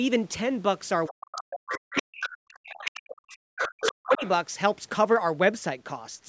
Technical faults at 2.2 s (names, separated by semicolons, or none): other side's voice leaking through; speech suppressed in double talk